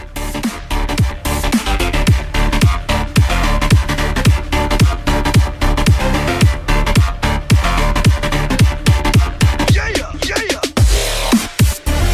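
No dropouts, distortion, noise bursts or timing errors turn up anywhere in the recording.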